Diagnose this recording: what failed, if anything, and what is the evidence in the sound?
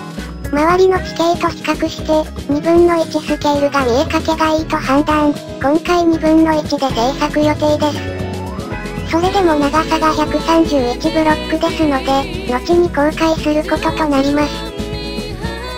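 Nothing stood out on listening that would point to a failure at any stage of the chain.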